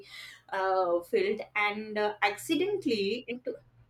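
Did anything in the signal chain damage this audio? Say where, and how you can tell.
Yes, at the codec stage. Right around 3.30 s the speech lurches forward, with roughly a tenth of a second simply gone. That's compressed frames skipped: the decoder drops a handful of whole frames, which fits a frame length of about 24 ms.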